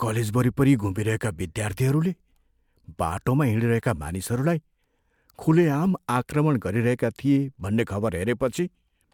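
Nothing is technically wrong with this speech recording.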